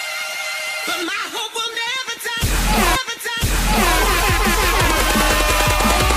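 A stream segment repeated from 2.95 s to 3.95 s: the player delivered the same one-second chunk of the stream twice, so the programme jumps back and replays a full second of material it has just played, adding 1.0 s to the running time. A small blip marks the seam at 2.95 s where playback snaps back, and the following second is an exact duplicate of the preceding audio before the programme continues forward.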